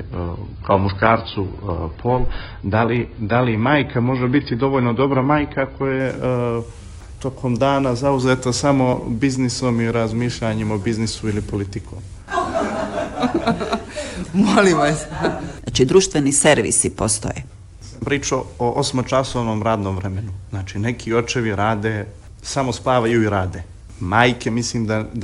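For the first 6.0 seconds the adaptive stream is starting at a low bitrate: nothing sounds above 5 kHz, with smeared, artefact-heavy detail suggesting roughly 16 kbit/s AAC. At 6.0 s the player steps up, without a gap, to fuller treble suggesting 96 kbit/s. A spectrogram shows a flat ceiling that lifts abruptly.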